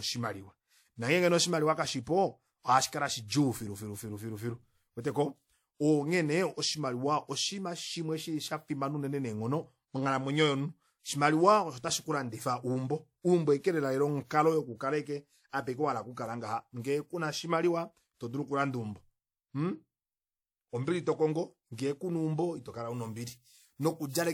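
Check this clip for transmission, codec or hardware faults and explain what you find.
One fault is present: pre-emphasis left on, from 22.90 s, just after "kuna eumbo itokola", to the end. The treble boost applied for transmission, matching the FM 50 µs curve, was never undone by de-emphasis, leaving 10 kHz about 11 dB above 1 kHz. The speech turns thin, bright and sibilant.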